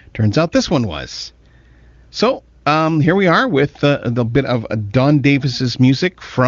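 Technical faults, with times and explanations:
No technical faults are audible in this speech; it carries the band-limited, HD Voice character of an AMR-WB link running at its top rate of 23.85 kbit/s.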